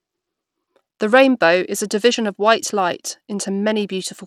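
Bluetooth SBC compression damage runs through the whole of this speech clip, from start to finish, and it is plainly audible. The treble flickers in and out, and a gritty, grainy noise with aliasing clings to the sound. The likely cause is the SBC codec running with a small bit pool, which fits a rate near 96 kbps. Its few wide sub-bands starve the upper bands of bits and quantise the rest coarsely.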